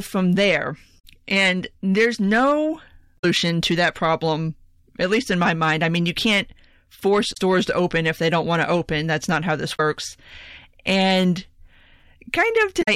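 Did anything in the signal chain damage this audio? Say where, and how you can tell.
Yes. Hard clipping runs through the whole speech clip: the signal was driven about 7 dB past what a converter or sample-format stage could pass, flattening roughly one to two percent of samples. Loud peaks pick up crackle, seen as flat-topped waveform peaks and harmonic smear reaching high up the spectrogram.

Damaged data in a compressed stream, at the codec or storage stage, produces brief glitches at 0.96–1.04, 3.15–3.25, 7.30–7.37, 9.73–9.80 and 12.79–12.88 s. At each one the decoder misread corrupted frames and resynced, leaving a short disturbance.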